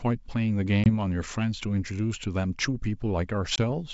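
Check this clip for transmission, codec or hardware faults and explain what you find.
There's one problem here: packet loss on an ADPCM call, hitting twice, at 0.84 to 0.90 s and again at 3.56 to 3.58 s. Each time about 20 ms of audio, probably a single packet, drops out to a hard-edged silent gap. The decoder's adaptive predictor and step size then no longer match the sender's, so the speech comes back slightly distorted, with a bit of grit until it resyncs. The underlying G.722 wideband sound is clean, with little or no coding damage.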